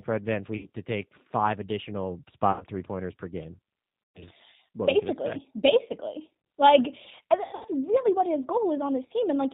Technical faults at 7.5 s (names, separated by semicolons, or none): G.729 codec; VoIP packet loss concealed by the speech codec